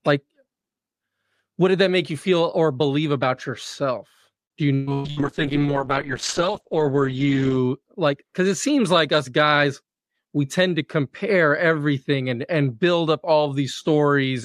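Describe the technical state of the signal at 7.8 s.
A call bitrate drop runs from 4.88 to 7.87 s, so 7.8 s sits at its tail. The encoder was starved of bits, consistent with a fall from around 64 to 9 kbps. The top end narrows from 20 kHz to 8 kHz, and the speech sounds coarse, watery and muffled.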